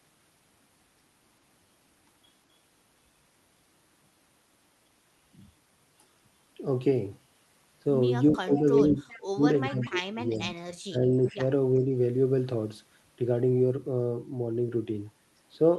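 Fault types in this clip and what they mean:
Speech suppressed in double talk: The speech level falls sharply while both ends talk at once, likely because the echo canceller cannot separate the near talker from the loudspeaker echo and turns everything down. The worst stretch runs from 8.32 to 10.44 s, with dips reaching around 30 dB and adding up to about a second and a half. A shallower dip of about 15 dB follows between 10.89 and 11.4 s, and a slight one from 11.84 to 11.91 s.
Echo leak: Short delayed copies of the speech come back, trailing the original by 393 ms. They are likely residue from a loudspeaker whose echo canceller did not fully remove it. The scraps are brief and sit well below the speech, roughly 15 to 25 dB down. They appear at 8.51 to 8.6, 9.08 to 9.2, 9.81 to 9.89, 10.34 to 10.55 and 11.11 to 11.31 s, overlapping the suppressed stretches.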